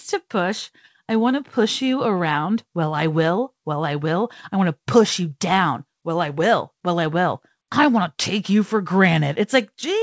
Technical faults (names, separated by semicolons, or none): none